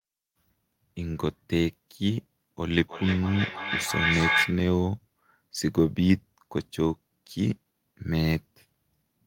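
From 2.7 s to 4.71 s the speech picks up a feedback echo between two devices. A second device in the same room plays back what the first microphone sent, and that microphone captures it again. Each device's echo canceller handles only its own playback, so the loop goes unchecked. Every syllable returns about a third of a second later, thinner and ringing, and the repeats reach about the same level as the speech itself instead of fading.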